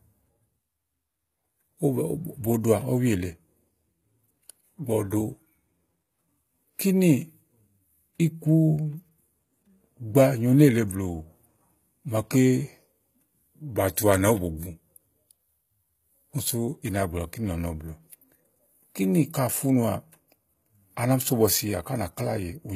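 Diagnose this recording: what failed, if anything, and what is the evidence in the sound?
The codec stage is at fault throughout the speech. The treble sounds synthetic: s sounds come out gritty and lispy, and the damage is plainly audible. Nothing is present above 14.9 kHz. This is likely HE-AAC compression at a low bitrate, around 20 kbps. Only the lower band is truly coded, and spectral band replication rebuilds the top by copying lower bands upward, so harmonics fail to line up across the crossover.

Pre-echo, also a codec-stage fault, appears at 13.96 s. A hiss of about 14 ms runs just ahead of a sharp onset, and the attack itself sounds softened and smeared. The transform codec spread its quantisation noise across the whole block, and because the transient landed late in that block, the noise sized for the loud attack leaked into the quiet moment before it.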